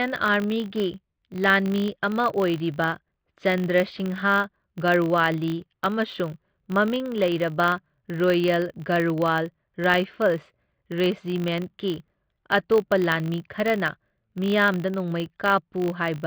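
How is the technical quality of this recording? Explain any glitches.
The speech has a steady glitch running all the way through. It's a filter restarted on every block: the filter drops its state and starts each block from silence, so each boundary gets a small transient. At about 50 Hz, which fits 20 ms blocks, those ticks merge into a buzz that rises and falls with the level of the speech.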